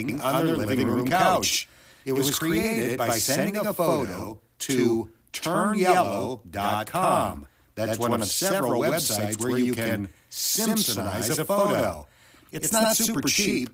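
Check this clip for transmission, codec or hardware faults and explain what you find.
One fault runs through the whole speech clip: channel delay (doubling). Every syllable is followed by a same-level slap copy about 85 ms later. One channel arrives late by a long buffer, which fits 4096 samples, and summing to mono exposes the copy. The Opus voice compression leaves only light coding texture.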